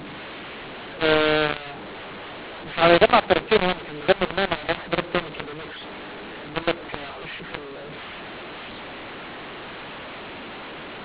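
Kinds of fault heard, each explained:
mu-law and A-law mixed up: speech coded as A-law is decoded as mu-law, so every level is remapped wrongly. The voice sounds harsh throughout and pauses fill with hiss, unlike G.711's normal faint noise, which stays well beneath the signal.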